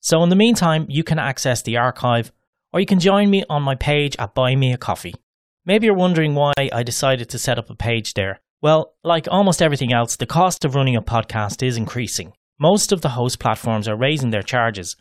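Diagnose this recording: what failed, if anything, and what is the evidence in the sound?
Codec stage: gaps at joins of encoded pieces. Speech drops out at 2.48 s (56 ms), 6.53 s and 10.57 s (40 ms each), every 4 s. Untrimmed encoder delay and padding.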